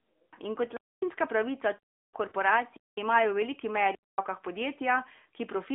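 The whole clip is speech carried through the AMR narrowband mobile codec at 10.2 kbps. The sound is confined to a line band of about 250 Hz to 3.6 kHz. Everything above sits beyond the codec's 4 kHz ceiling. The codec rebuilds each 20 ms frame from a vocal tract model driven by a few pulses. At this bitrate the damage is plainly audible. The voice has a buzzy, synthetic edge throughout.

At 0.77 s comes the first underrun with held sample. The output buffer ran dry and the converter froze on its last value. The waveform goes flat until 1.02 s, a gap of about 0.26 s. Roughly 0.3 s of live audio was lost meanwhile. So the sound does not resume where it stopped. It jumps ahead.

From 2.28 to 2.32 s, about 40 ms of lost AMR speech frames follow. That fits two dropped 20 ms frames. The decoder reused the last good pitch and vocal tract settings at falling gain. The result is a drawn-out, fading sound. 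The voice returns weak or rough for a moment.

The same underrun recurs twice more. It runs from 2.77 to 2.97 s, a flat hold of about 0.21 s. It runs again from 3.95 to 4.18 s, about 0.23 s. Each time roughly 0.2 s of live audio went missing.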